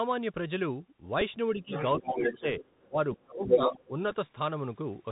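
Throughout, the Bluetooth CVSD headset codec is plainly audible. Nothing above 4 kHz gets through, s sounds turn scratchy, and a granular hiss rides under the speech. The one-bit delta coder's step size cannot keep up with loud, fast-changing sound. That hiss, which follows the signal rather than staying fixed, sets it apart from a simple narrowband filter.

At 1.21 s a Bluetooth headset packet is repeated. One 3.8 ms stretch is replaced by the previous packet's bits, which fits a single lost packet and is heard as a small tick. At 4.11 s about 7.5 ms is repeated, which points to two packets in a row.

From 1.55 to 2.63 s, 2.86 to 2.97 s and 3.15 to 3.93 s, speech is suppressed in double talk. The level dips by roughly 10, 20 and 30 dB at the deepest points. This is likely an echo canceller that turned the talker down while both sides talked.

The other side's voice leaks through in four places, likely as uncancelled loudspeaker echo. 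From 1.7 to 1.83 s it sits about 5 dB under the talker. From 2.09 to 2.41 s it is about level with the talker. From 2.62 to 2.85 s it is faint. From 3.45 to 3.84 s it is about 10 dB louder than the talker. It is a second voice, not noise, and it overlaps the suppressed stretches.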